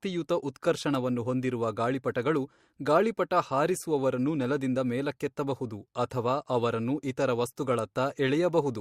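Pre-echo smears two speech attacks, at 0.54 s and 7.56 s. A short hiss arrives about 15 to 16 ms early, roughly 20 to 22 dB above the quiet before it. The codec spread noise over a whole block, which fits long 26 ms windows with no switch to shorter ones.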